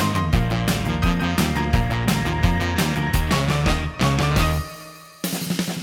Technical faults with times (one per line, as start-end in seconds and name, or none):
none